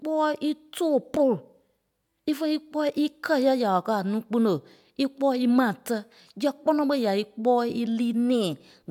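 No technical faults are audible anywhere in this speech recording.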